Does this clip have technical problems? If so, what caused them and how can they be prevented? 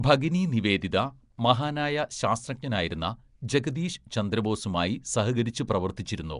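Yes. Throughout, likely Nellymoser compression starved weak bands of bits and filled them with noise, leaving a rough, hissy, underwater smear with nothing above 10.6 kHz. Capturing and exporting with a modern codec such as Opus or AAC at an adequate bitrate would prevent it.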